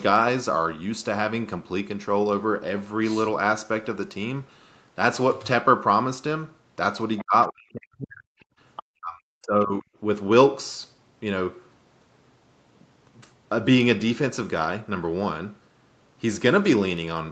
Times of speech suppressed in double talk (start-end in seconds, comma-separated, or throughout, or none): 7.21-8.29, 8.83-9.89